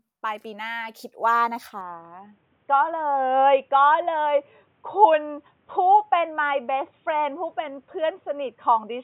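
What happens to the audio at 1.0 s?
Nothing goes wrong at 1.0 s; the speech plays through that moment intact.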